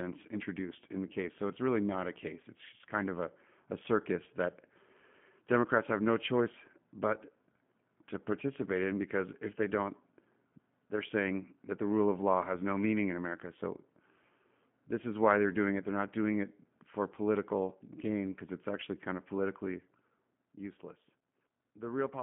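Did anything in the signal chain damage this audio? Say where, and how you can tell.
Yes. Codec stage: G.729 coding throughout the speech, with band limits at 150 Hz and 3.4 kHz plus a rough, buzzy synthetic texture. That texture, which fits an 8 kbit/s stream rebuilt from pulses, separates it from plain telephone filtering.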